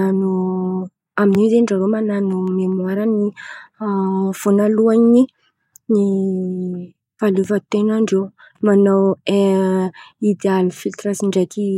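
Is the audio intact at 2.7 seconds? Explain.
No, that spot sits in a burst of CD scratch ticks from 2.48 to 2.97 s: three sub-millisecond clicks where damaged disc data beat error correction and got patched over.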